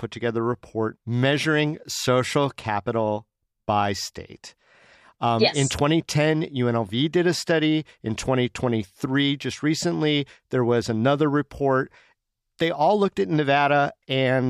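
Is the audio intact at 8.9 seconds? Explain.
Yes, the speech at 8.9 seconds plays through intact, with no dropout, click, distortion or other fault at that moment.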